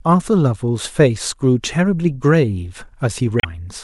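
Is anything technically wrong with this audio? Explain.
Yes. Near the end of the speech, from about 3.39 to 3.45 s, there is damaged data in a compressed stream. For roughly 60 ms the decoder was fed corrupt bytes, misread those frames, lost sync and hunted for the next valid frame header. This is heard as a brief glitch: a chirp, squawk, click or short hole in the speech.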